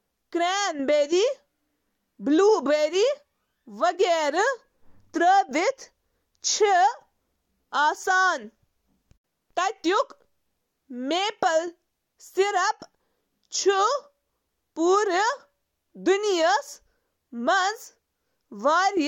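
Nothing in the speech recording stood out as a technical fault on listening.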